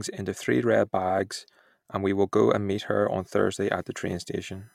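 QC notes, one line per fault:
3.20 to 4.75 s, USB whine: after "and meet her on", a steady tone appears at 1 kHz, with its strongest component up at 22 kHz. It sits well below the speech, roughly 35 dB down. The USB bus draws current in 1 ms frames. That ripple leaks through power or ground as a fixed-pitch whine.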